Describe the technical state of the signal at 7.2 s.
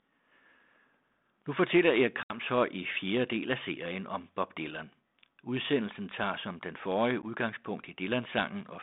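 At 7.22 to 7.24 s there is packet loss on an ADPCM call: about 10 ms, roughly one packet, drops to silence on this 32 kbit/s G.726 line. The waveform shows a hard-edged flat gap, then slightly distorted speech as the predictor resyncs. On a spectrogram this appears as a blank vertical slot.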